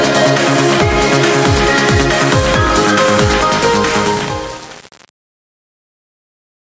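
From the start, the level keeps lunging up and down by about 15 dB, and the clip sounds flattened, with loud and soft passages squeezed together. This is gain pumping, likely from input gain set far too high with a fast limiter or compressor clamping down on each peak. Unlike a natural room swell, the ducking follows every loud onset.

From 3.33 s the fade-out toward 6.77 s begins its descent, running roughly from 3.5 s to the end. Over that stretch it turns gritty, and from about 3.49 s onward the tail grows coarser. This is truncation distortion on a fade. The fade stage kept too few bits without dither, which fits a word of around 7 bits. The quiet waveform collapses into a handful of square steps. Dither noise would stay a steady hiss, but this grit rises and changes as the level drops. A lossy codec smears highs across the whole clip, while this breakup appears only at the quiet end. 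The band stops at 8 kHz throughout, which is ordinary call microphone processing.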